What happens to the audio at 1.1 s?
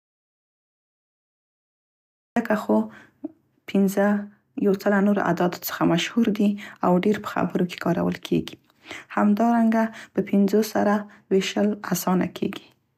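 At 1.1 s the clip is in an audio dropout to silence, running from the start to 2.36 s. The input was likely lost while the recorder kept writing silence, so speech cuts in abruptly. Unlike a natural pause, the gap is dead silence with no room tone.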